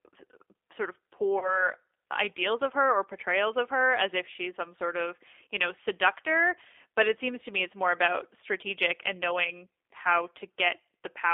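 The whole clip carries G.729 codec damage. The band runs about 300 Hz to 3.6 kHz, and the rough, synthetic texture points to an 8 kbit/s codec.

From 1.39 to 1.69 s, between "sort of" and "ideals of her or", there is VoIP packet loss concealed by the speech codec. About 30 ms went missing, which fits one lost packet. The decoder stretched its last sound into a fading buzzy tone or coloured noise, and the voice stays weak or distorted afterwards.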